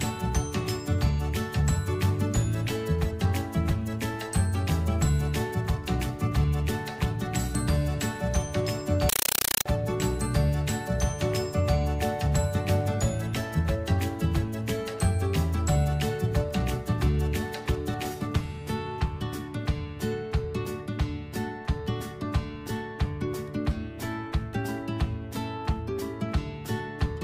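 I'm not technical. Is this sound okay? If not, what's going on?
No. From 9.09 to 9.66 s the sound turns into loud, chattering static. This is a compressed stream played as audio. The data, which points to a Dolby Digital stream, was played as sound without decoding. It comes as short 8 ms noise bursts, about 31 per second.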